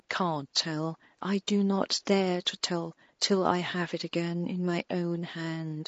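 Low-delay AAC compression runs throughout the speech, most likely AAC-ELD at a low bitrate, which fits about 32 kbps. Its short frames resolve pitch harmonics poorly, so the voice sounds plainly rough and grainy, with noise between harmonics, while room noise sits about 48 dB below.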